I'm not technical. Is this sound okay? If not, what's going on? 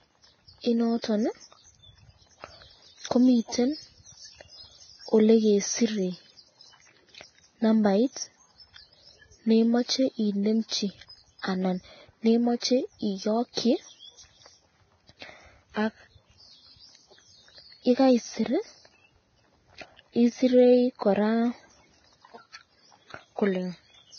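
No. The speech sounds hissy and grainy throughout, and everything above 6.5 kHz is missing, so it sounds dull and muffled. This is likely heavy Vorbis compression. The file was squeezed so small that fine detail turned into noise.

There is also pre-echo at 1.02 s, from 10.68 to 10.71 s, and from 13.53 to 13.57 s. Just before a sudden sound, a brief hiss leaks in early. The compression spreads its noise backwards, so each attack sounds smeared.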